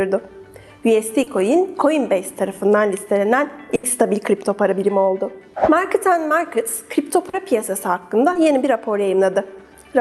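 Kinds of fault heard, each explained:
Short concealed packet loss: A few hundredths of a second never made it to the decoder in time, so the receiver kept the last sound going from its pitch, or as shaped noise, and then blended back into the real signal. You hear it as a quick smear or wobble around 1.23 s, 7.29 s and 8.33 s, with gaps of 20 to 40 ms. The first one also adds a touch of delay.
Burst of packet loss: At 3.75 s a longer stretch, 80 ms, dropped out in one go. The receiver stretched the last sound across the gap and faded it down as it went, so a pitched sound comes across as a brief held buzz and anything else as a fading hiss. When the audio picks up again at 3.85 s, the 80 ms that should have been in between is simply gone.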